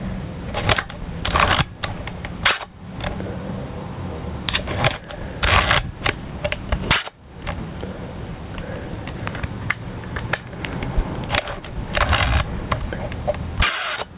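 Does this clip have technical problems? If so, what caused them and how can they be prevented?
Yes. The clip has gain pumping from start to finish. The gain is pulled down on every loud sound. The level swings by roughly 15 dB. Loud and quiet sounds end up squashed close together. The likely cause is an input gain set far too high, with a fast limiter or compressor clamping down on every peak. The narrow top end, with nothing above 4 kHz, fits a G.711 call path. To prevent the pumping, lower the input gain until peaks no longer trigger the limiter.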